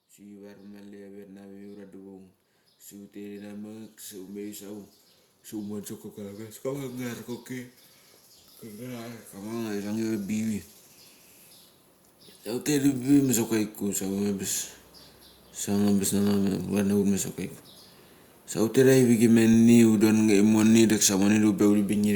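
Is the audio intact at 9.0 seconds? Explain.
No. From 8.75 to 10.58 s the speech and the background noise swell together, growing about 4 dB louder over nearly two seconds. This is automatic gain rising: the gain control judged the input too quiet and gradually turned its gain up.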